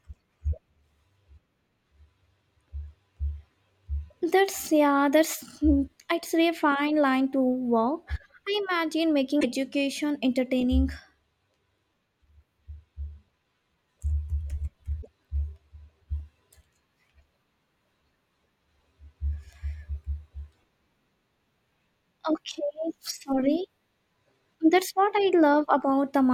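Damaged data in the compressed stream throws the decoder off frame sync at 9.39 to 9.45 s and 14.98 to 15.08 s, leaving brief glitches in the speech.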